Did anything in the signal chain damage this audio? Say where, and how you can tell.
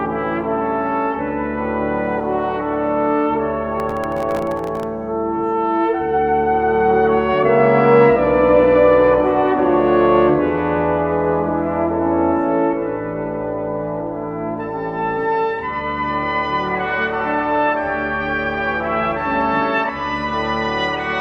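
Yes. Processor overload crackle at the driver or buffer stage, from 3.8 to 4.83 s. Dozens of tiny buffers missed their deadlines, each replaying stale audio with hard edges.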